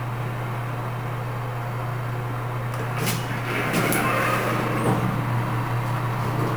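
From start to finish the audio carries a crude rate conversion. Each output sample simply repeats the nearest input sample, with no interpolation filter, which fits an upconversion from 32 kHz to 44.1 kHz. The resulting error repeats in a fixed cycle set by those two rates and sits roughly 20 dB below the signal. It produces inharmonic tones that are heard as a gritty fizz riding on the louder and brighter moments of the sound.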